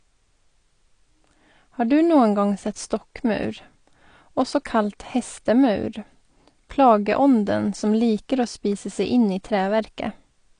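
Speech runs the whole clip with a dull, band-limited sound: nothing reaches above about 9.8 kHz, and sustained vowels and sibilants take on a warbling, fizzy texture where parts of the spectrum drop out frame by frame. This is likely AAC compression at a low rate, consistent with AAC-LC around 32 kbps. A simple low-pass filter would dull the top equally but leave the remaining band clean; here the holes and swirling artefacts show a codec starving bits.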